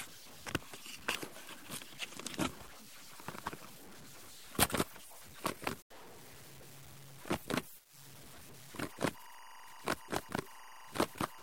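From the first second to the last, there's a grainy, gritty texture riding on the sound, and it tracks whatever is happening: the quiet bits turn gritty and break up into a sputtery crackle or drop out entirely. That's low bit depth without dither, likely around 8 bits with plain truncation. The rounding error sits only about 20 dB under the signal.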